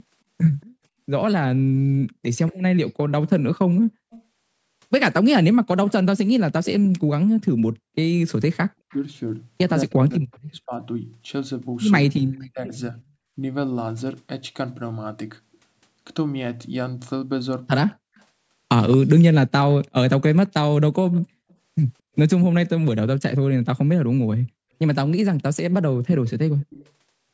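From 0.61 to 10.39 s there's an echo leak: a faint copy of the speech trails it by 225 ms, about 25 dB down. That's likely a far-end loudspeaker whose echo canceller let some pickup slip back. It returns louder, around 15 dB down, from 17.94 to 21.53 s, and briefly again at 26.27 to 26.88 s.

Overlapping that first stretch, from 9.85 to 13.09 s, the speech dips and cuts out in pieces, about a second in total and as deep as roughly 40 dB. That's speech suppressed in double talk: with both sides talking, the canceller likely couldn't tell talker from echo and turned everything down.

From 22.72 to 24.38 s the background is gated by the echo canceller. The room tone drops out briefly, a fifth of a second or so in all, down about 40 dB, as the canceller clamps the microphone while the loudspeaker plays.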